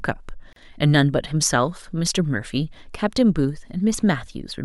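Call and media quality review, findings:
Gap at a join of encoded pieces, 0.53 to 0.56 s: 34 ms dropout mid-speech, sound resumes where it stopped. Probable component: segment concatenation without trimming encoder delay and end padding. Waveform shows a flat gap; spectrogram shows a full-band vertical blank with smeared edges.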